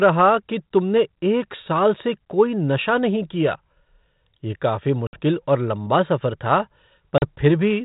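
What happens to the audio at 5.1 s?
Packet loss on the ADPCM call drops about 60 ms of audio, from 5.07 to 5.20 s. The gap is hard-edged silence. The decoder's predictor and step size lose track, so the sound returns distorted before it settles.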